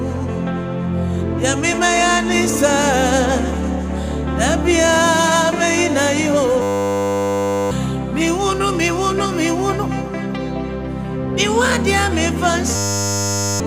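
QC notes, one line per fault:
6.62–7.71 s, system hang loop: a single 10 ms slice of audio repeats exactly for about 1.1 s, giving a steady buzz at 100 Hz. The host or driver stalled while the sound hardware kept replaying its short ring buffer, and about a second of audio is lost.
12.76–13.6 s, system hang loop: the same fault recurs with the same 10 ms loop and 100 Hz buzz, lasting about 0.8 s. Again, roughly a second of audio is missing.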